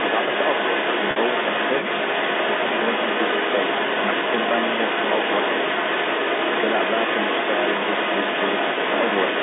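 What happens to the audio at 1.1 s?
From 1.11 to 1.16 s, a 50 ms stretch of the signal drops out, which fits five lost 10 ms packets, and the receiver covers the gap with packet loss with pitch repetition. It loops the last pitch period and fades it down, so the sound briefly hangs on a slightly held, buzzy tone before the speech resumes. On a spectrogram, the harmonics run perfectly flat and unchanging for those 50 ms and then thin out. In the waveform, identical repeated cycles appear under a shrinking envelope.

The same moment also carries a second voice, present from 0 s to the end at 9.4 s and at roughly the same level as the main talker. This is most likely the other side's voice leaking through, picked up from the talker's loudspeaker and not fully removed by echo cancellation. On a spectrogram, two overlapping sets of harmonics with unrelated pitch contours share the band up to about 3.6 kHz.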